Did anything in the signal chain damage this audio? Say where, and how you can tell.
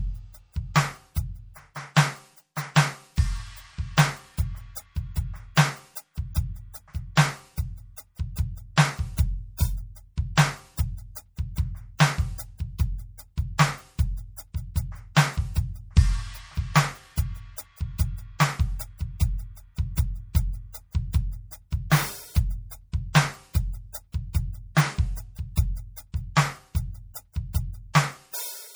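Yes, at the codec stage, and it runs the whole way through the music. It's likely low-bitrate audio saved at a high bitrate: the smeared, thinned-out detail fits a 64 kbit/s MP3 rewrapped at 192 kbit/s, which can't restore anything the first encode discarded.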